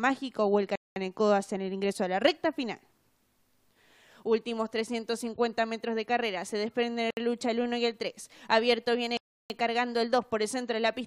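Bluetooth stalls at 0.76, 7.11 and 9.17 s drop the sound to silence for 205, 66 and 330 ms, likely because delayed packets let the headphone buffer run dry.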